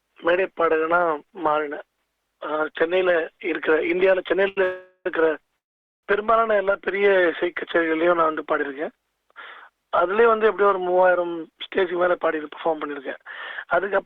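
At 4.48 to 4.58 s there is a short stall from a late packet: the sound is held for 82 ms while the jitter buffer runs empty, then resumes with nothing lost.

Two call audio freezes follow, at 4.64 to 5.06 s and 5.58 to 6.04 s, likely from delayed packets. The first is a 418 ms fading buzz or hiss. The second is 445 ms, nearly all silence.

From 11.19 to 13.19 s a jitter buffer speed-up trims roughly 150 ms of audio. Playback runs at about 107% speed with unchanged pitch, sounding hurried.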